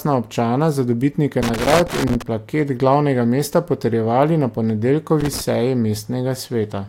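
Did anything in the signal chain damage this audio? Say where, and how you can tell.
Yes. The analogue wiring stage shows loose connector crackle: irregular bursts of scratching over the speech from 1.42 to 2.22 s and again from 5.20 to 5.41 s. A worn or dirty contact is intermittently breaking the signal path, chopping the audio, and any DC present turns each make or break into a click.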